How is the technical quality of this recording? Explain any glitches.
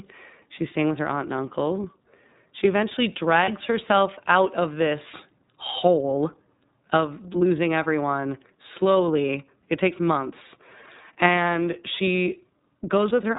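The recording has plainly audible codec damage throughout and one brief dropout.

iLBC codec, throughout the speech: the band stops at 4 kHz, and each frame's excitation is coded independently. This leaves the speech clear but rough and slightly synthetic. The damage is plainly audible, and the sound fits the 13.33 kbps mode with 30 ms frames.

Lost iLBC frames, 3.45 to 3.49 s, just before "herself out of this": roughly one 30 ms frame went missing. The decoder filled it by repeating the last pitch cycle blended with noise, so there is a short held, buzzy vowel. Because frames stand alone, the speech recovers immediately afterwards.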